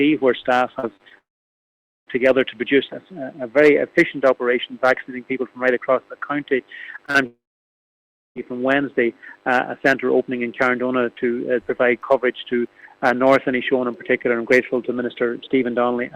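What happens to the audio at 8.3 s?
A long network dropout runs from 7.26 to 8.37 s, so at 8.3 s the audio is still in the gap, just before it resumes. This is likely a stretch of about 1.1 s of audio that never arrived. The receiver carries the last sound on as a fading buzz or hiss for roughly a tenth of a second, then leaves about 0.97 s of silence. Playback returns at 8.37 s without the lost portion.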